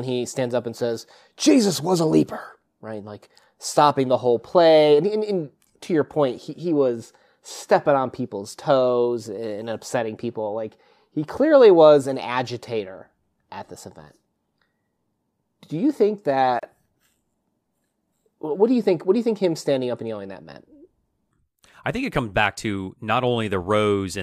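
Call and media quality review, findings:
Gap at a join of encoded pieces, 16.59 s to 16.63 s. Speech cuts to about 33 ms of silence, edges smeared, then resumes where it stopped. Probable component: segment concatenation after encoding. Encoder start delay and last-frame padding left untrimmed at the join.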